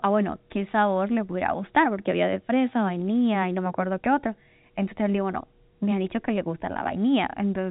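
There are no technical faults in this speech, which comes through the telephone-band G.711 path with nothing above about 3.8 kHz.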